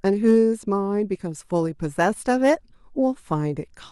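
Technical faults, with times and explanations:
0.06–0.38 s and 2.00–2.53 s, hard clipping: crackly, harsh edges on loud speech peaks, worse in the second run, as the signal overran the stage's limit by about 2 dB and then about 4 dB, flattening the peaks.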